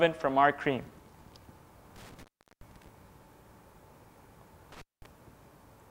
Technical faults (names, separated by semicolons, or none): intermittent contact